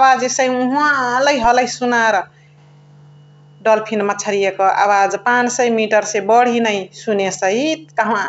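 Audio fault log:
1.44 s, DC step: the waveform's zero line jumps once and then drains away through a roughly 20 Hz high-pass, giving a single low thump under the continuing speech.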